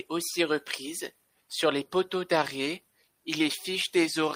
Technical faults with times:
none

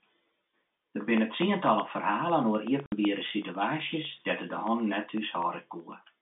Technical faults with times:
0.17-6.05 periodic USB or driver dropouts
2.86-2.92 packet loss filled with silence

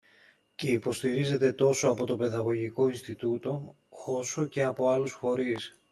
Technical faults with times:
0.00-5.92 channel delay (comb filtering)
5.56-5.58 loud pop

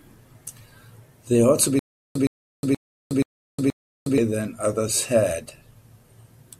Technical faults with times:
1.79-4.18 stutter with silent gaps

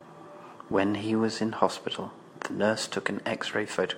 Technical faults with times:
none

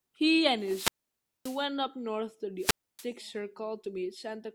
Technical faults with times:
0.58-1.66 wireless microphone squelch dropout
2.58-3.07 wireless microphone squelch dropout

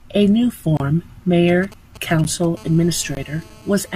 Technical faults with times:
0.77-0.80 block of digital silence
1.48-2.45 GSM signalling bursts
2.24 block of digital silence
2.57-3.96 GSM phone buzz
3.15-3.17 block of digital silence

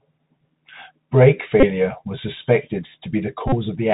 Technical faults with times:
0.00-3.94 Bluetooth CVSD headset codec
1.60-1.65 Bluetooth headset packet repeated
3.48-3.52 Bluetooth headset packet repeated

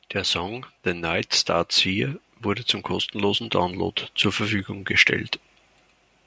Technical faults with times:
0.37-2.22 automatic gain rising

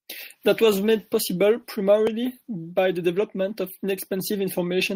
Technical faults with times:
none

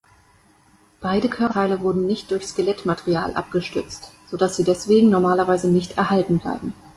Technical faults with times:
1.47-1.53 damaged data in a compressed stream

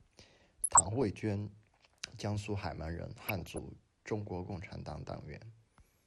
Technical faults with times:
0.00-6.07 MP2 compression
0.63-1.04 DAB burbling
3.27-3.58 DAB burbling
5.11-5.15 DAB burbling

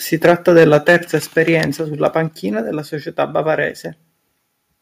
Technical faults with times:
0.24-0.96 microphone overload
0.26 microphone volume stepped down
1.26 microphone volume stepped down
1.38-1.41 microphone overload
2.28 microphone volume stepped down

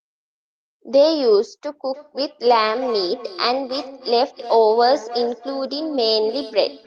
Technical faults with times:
1.93-6.86 feedback echo between two devices

